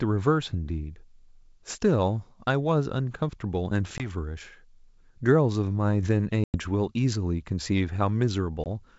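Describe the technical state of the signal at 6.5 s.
Packet loss on an ADPCM call spans 6.44 to 6.61 s: about 100 ms of audio, a handful of packets, drops to hard-edged silence. The decoder's predictor and step size lose sync with the sender, so the sound resumes slightly distorted before settling.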